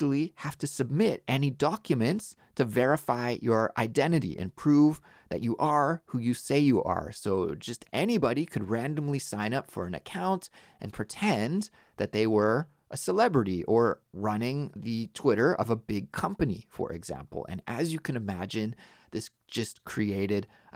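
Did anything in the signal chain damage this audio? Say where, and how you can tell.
No, nothing in the chain seems to have damaged this speech, and I can't point to any moment or any stage where something went wrong.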